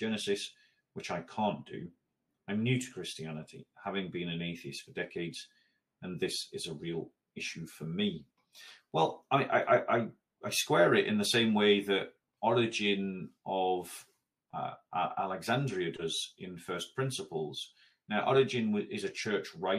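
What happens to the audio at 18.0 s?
Nothing goes wrong at 18.0 s; the audio plays through that moment intact.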